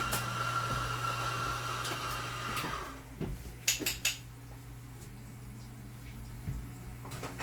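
Low-bitrate audio saved at a high bitrate runs throughout: the sound carries the artefacts of a low-rate Opus-style encoding, likely about 32 kbit/s, later rewrapped as MP3 near 190 kbit/s. The larger file restores nothing, and content reaches up to 20.2 kHz.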